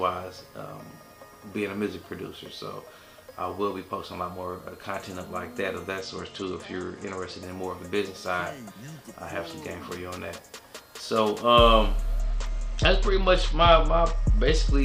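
From 6.01 to 7.43 s and again from 12.20 to 14.82 s, a Bluetooth SBC bit pool drop dulls the treble and adds gritty noise. The spectrogram's upper bands go empty, which fits a bit pool falling to about 11, or roughly 83 kbps.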